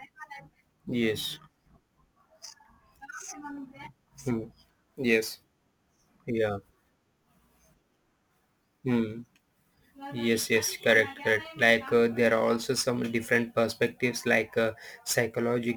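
Crude rate conversion runs from start to finish. The sound points to a nearest-sample conversion from 48 kHz down to 44.1 kHz: samples were simply dropped in a fixed repeating pattern, with no anti-aliasing filter. That periodic error produces tones unrelated to the speech, sitting roughly 25 dB below it. It comes across as a gritty, inharmonic fizz riding on the louder and brighter parts of the speech.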